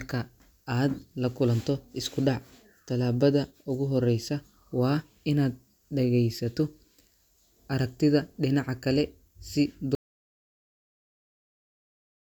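A speech clip whose sound cuts off abruptly at 9.95 s, right after "aragtida dhinaca kale si", and never returns: from there to the end the track holds silence, with no room tone or background hiss at all. That dead gap is an audio dropout to silence. The likely cause is the input being lost, through a disconnected device, a failed link or an accidental mute, while the recorder kept writing silence, so anything said after that point is gone.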